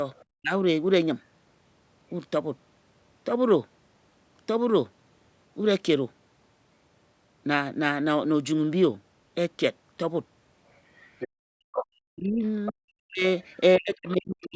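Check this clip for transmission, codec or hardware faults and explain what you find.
Three kinds of echo-canceller trouble show up here, clustered at the very start and in the last few seconds.

Other side's voice leaking through, at 0.15–0.25 s, 11.19–11.86 s, 12.65–12.72 s and 13.41–13.6 s. A second voice sneaks in under the main talker: very faint at the first and last spots, sitting maybe 35 dB down, but much more noticeable around 11.2–12.7 s at only about 15 dB below. This is likely residual echo the canceller didn't fully subtract from the loudspeaker pickup.

Speech suppressed in double talk, at 0.41–0.53 s and from 11.7 s through to the end. The main voice dips sharply, by something like 40 dB at its deepest, adding up to around 2 s of damage in that closing stretch. That's likely the canceller seeing both sides active at once, failing to tell its own talker from the echo, and clamping down on everything.

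Background gated by the echo canceller, at 11.28–11.42 s. The room tone drops out by about 40 dB for roughly 150 ms, then comes back. The canceller slammed the mic gain down hard while the far end was playing through the speaker, so the ambience briefly vanishes and pops back when it releases. The call mic processing band-limits everything to 8 kHz, and its bass cut is normal, so neither of those is a problem.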